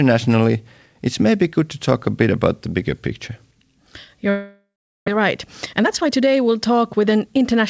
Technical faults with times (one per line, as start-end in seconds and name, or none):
4.30-5.17 long network dropout
5.73-7.61 jitter buffer speed-up